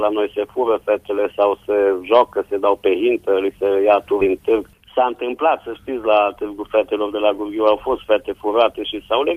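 At 4.21 s the audio skips ahead. The join lasts until about 4.29 s and has almost no gap. Roughly 0.7 s of sound is simply gone. It was dropped on the way or discarded by an overfilled jitter buffer while newer audio was already queued. Playback lands straight on later material, so the sound jumps abruptly, and the delay falls by about the same amount.

From 4.79 s to 5.49 s there is a jitter buffer speed-up. The buffer held more audio than its target, so the receiver cut many short pitch-period-sized pieces in quick succession. In total, a few tens of milliseconds were removed. The sound plays about 5 percent faster with its pitch unchanged. It feels slightly rushed through that stretch.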